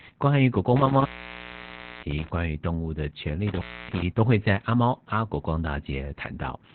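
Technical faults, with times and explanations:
Throughout, Opus voice compression: speech is band-limited near 4 kHz and sounds hoarse and robotic, not merely muffled, pointing to narrowband SILK coding around 8 kbps.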